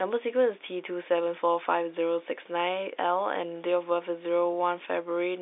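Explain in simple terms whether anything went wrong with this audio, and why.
Nothing went wrong: the speech has simply passed through an ordinary telephone line's G.711 coding, which keeps only the band from about 300 Hz to 3.7 kHz and removes everything above roughly 3.8 kHz, so it has the narrow sound of a normal phone call.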